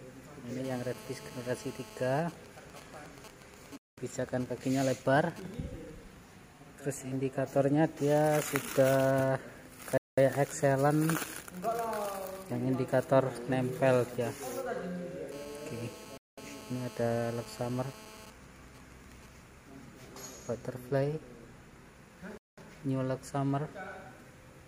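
From 0.65 to 2.21 s a GSM phone buzz sits under the audio: a hard, raspy tone at about 217 Hz with a dense stack of harmonics, roughly 18 dB below the signal. A nearby 2G handset in a call is transmitting its bursts at that rate, and the audio circuitry is rectifying the RF pulses into audible signal. The buzz returns unchanged from 15.32 to 18.26 s.

Immediately after the first buzz, from 2.22 to 5.54 s, the steady tone turns into GSM signalling bursts, even ticks with a longer 217 Hz buzz twice a second, at around 20 dB down. This pattern fits the handset still being in the call while its user is silent, so it sends only sparse groups of bursts instead of continuous transmission. The same pattern follows the second buzz from 18.27 to 19.29 s, a little quieter at around 25 dB down.

A gap between chunks opens at 3.78, 9.98, 16.18 and 22.38 s. Each is a 200 ms hole, and they repeat every 6 s. 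This indicates audio handled in 6-second blocks with silence inserted at each join. Nothing is dropped, but the sound stops dead and resumes at each boundary. The first gap falls inside the signalling bursts and the third falls inside the second buzz.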